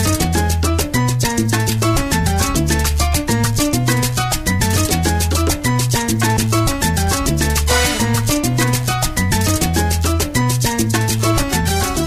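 No technical faults can be heard anywhere in the audio; the signal stays continuous and stable throughout.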